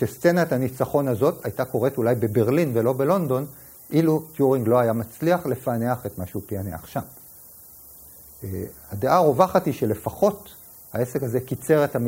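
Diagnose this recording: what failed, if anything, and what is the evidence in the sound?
The failure sits at sample-format conversion: low bit depth with noise shaping, present across the whole recording. A steady, thin hiss runs beneath the sound from start to finish, tilted sharply toward the top of the band, and it sits only around 20 dB below the signal. The audio has been requantised to 8 bits, and the rounding error was fed back through a filter that shoves the noise upward in frequency, leaving it bright and high rather than broadband.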